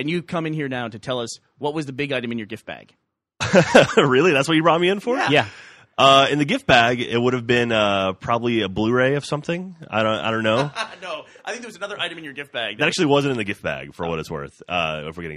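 Nothing is technically wrong with the audio in this clip.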